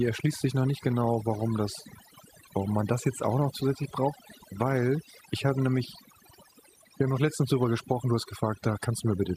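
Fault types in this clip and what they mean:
overdone noise removal: Across the whole speech clip the background drops, broken only by twinkling, chirpy specks, and the voice has its softer details washed away. A noise reduction process was pushed too hard on a noisy recording, so narrow frequency bands judged close to the noise level were pulled right down or switched off, taking the quieter parts of the voice with them.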